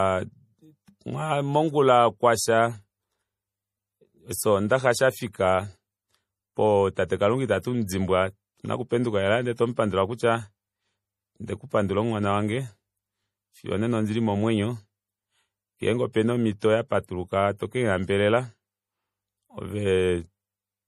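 From start to finish the speech carries a watery, swirly quality, with s sounds turning metallic and consonant attacks smeared. That's likely MP3 compression working with too few bits, and the damage fits a low bitrate of around 40 kbps. The encoder has thrown away quieter frequency detail, so parts of the spectrum flicker on and off between frames. It has also cut the treble off entirely, leaving nothing above 15.2 kHz.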